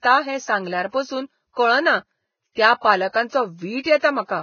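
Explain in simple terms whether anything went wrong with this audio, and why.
Something did go wrong. The speech was squeezed hard to make the file small, most likely by Vorbis compression at a very low quality setting. To save space, the encoder threw away everything above about 6.6 kHz and stored the remaining upper detail only roughly, replacing it with noise of similar strength. The result sounds muffled at the top yet hissy and grainy throughout, with a rough edge on the voice and softened starts to sounds.

A second problem, pre-echo, comes from the same kind of coding. The encoder works on short chunks of sound and spreads its errors evenly across each chunk. When a sudden, sharp sound lands near the end of a chunk, that error noise also fills the quiet moment just before it. You can hear a brief hiss leading into sharp sounds at about 2.52 to 2.56 s, 3.83 to 3.85 s and 3.99 to 4.02 s, making those onsets sound smeared.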